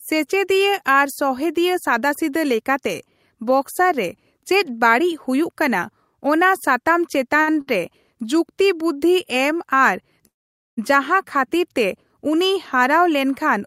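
At 7.41 s and again at 7.61 s there is a short stall from a late packet. Each time a packet arrived late and the jitter buffer emptied, so the receiver held the last sound for about 58 ms with a slight buzz or dip, then resumed without losing any speech.

From 10.27 s to 10.79 s there is a call audio freeze. The sound stretches briefly and then drops to near silence for roughly half a second before the speech resumes where it stopped. This was likely caused by packets held up in transit, which emptied the jitter buffer. The gap adds about 500 ms of delay, and nothing is missing.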